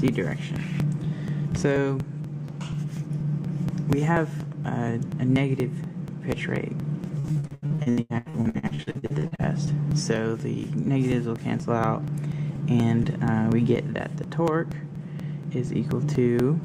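Periodic USB or driver dropouts run from 0.08 s to the end, every 0.24 s. A background task stalls the audio path at each interval, and a sliver of sound is simply skipped, so evenly spaced ticks are heard whenever signal is present. Repeated packet loss (robotic sound) hits from 7.19 s to 9.41 s. Holes arrive in quick succession, the longest 85 ms, and each is patched by stretching the last fragment. About half that span ends up concealed, which gives choppy audio with pieces missing.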